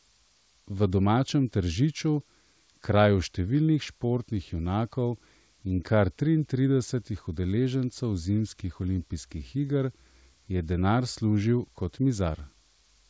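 No faults are audible in the speech; it passes through a call codec path whose top end stops at 8 kHz, consistent with wideband G.722 at 64 kbps.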